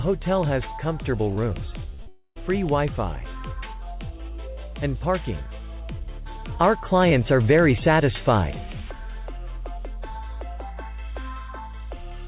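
At 1.94 s and again at 2.02 s there is short concealed packet loss. Each gap is about 40 ms of audio that arrived too late. The receiver continued the previous sound to cover it. Both spots come out as a quick smear or wobble.

From 2.08 s to 2.38 s the sound turns into a fading buzz or hiss, then about 50 ms of near-silence before the audio resumes. This is likely a long network dropout. Roughly 0.28 s never arrived and the concealment could not bridge it.

All of this sits on a narrow call path, with nothing above 4 kHz, consistent with G.711 mu-law coding.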